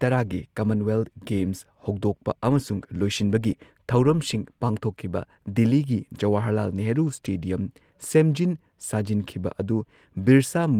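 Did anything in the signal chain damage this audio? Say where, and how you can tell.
No, the speech comes through the chain intact, with its Opus voice coding at 24 kbps in hybrid mode keeping the full band and leaving only a light trace of the coding.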